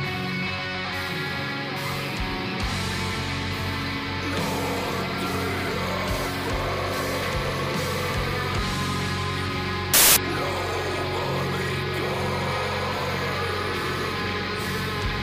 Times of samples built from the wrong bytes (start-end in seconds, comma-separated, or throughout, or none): 9.94-10.16